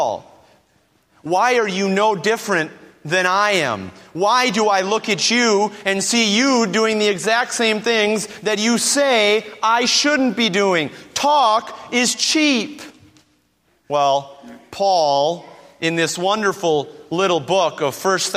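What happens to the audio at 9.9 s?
Nothing goes wrong at 9.9 s; the audio plays through that moment intact, with no dropout, click or distortion.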